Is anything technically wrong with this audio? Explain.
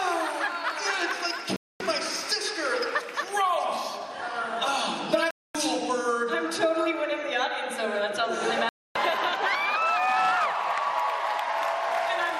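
Yes, there's a digital broadcast dropout, three times: 1.56 to 1.81 s, 5.31 to 5.55 s, and 8.69 to 8.96 s. Each time the sound cuts to silence for about a quarter of a second and then carries on further along, with the missing stretch simply gone. That's the receiver losing the signal or rejecting corrupt frames and muting until clean ones arrive. The gap lengths fit roughly ten or eleven frames of about 24 ms each.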